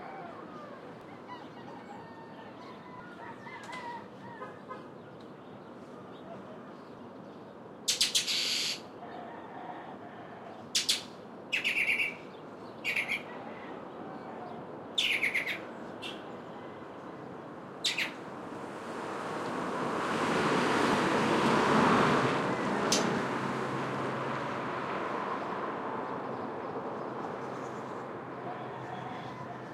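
Overlap between stream segments causes tiny skips in this sound recording at 1.01, 3.00, 12.97, 14.95 and 22.92 s, falling on 2-second segment boundaries. Where adjacent segments' timestamps overlap, the player trims roughly 5 ms of real audio, so the waveform jumps abruptly.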